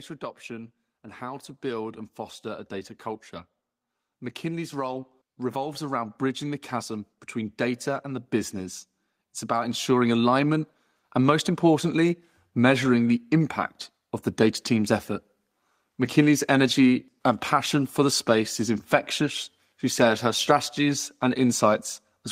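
The automatic gain control judged the input too quiet and pushed its gain up three separate times, so the speech and the background noise swell together rather than the voice alone getting louder. The automatic gain rising runs from 0.46 to 2.99 s, climbing about 3 dB. It then runs from 4.07 to 8.82 s, the longest and largest at about 7 dB, and from 9.47 to 11.53 s, about 4 dB.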